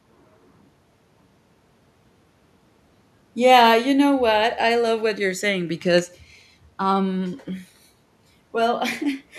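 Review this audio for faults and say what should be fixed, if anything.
No faults; nothing needs fixing.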